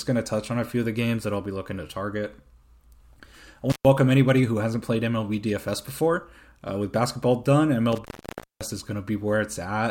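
At 3.70 to 3.85 s, just before "anybody who hasn't played", the speech drops out for about 130 ms. This is intermittent contact: a loose connection briefly opens. Crackle marks each edge. At 7.92 to 8.71 s, after "with basketball done", it opens again for about 560 ms, leaving faint hiss.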